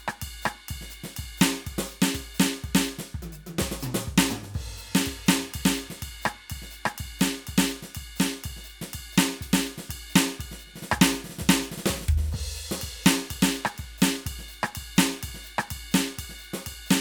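No technical faults can be heard in this music.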